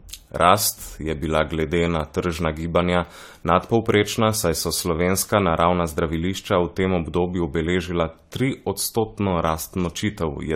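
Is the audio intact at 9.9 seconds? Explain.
No. At 9.9 seconds the speech carries generation loss, which runs through the whole clip. The sound is swirly, smeared and hollow, and consonant attacks are blurred. It is worse than a single encode at the rate it suggests, around 64 kbit/s AAC-LC, would give. The likely cause is repeated lossy encoding, perhaps four passes. Each pass quantises on a shifted frame grid, so noise and spectral holes pile up. Nothing sounds above 19.9 kHz.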